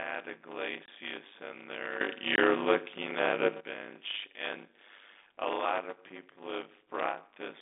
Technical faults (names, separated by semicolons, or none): block size mismatch (padded); packet loss filled with silence; sudden gain jump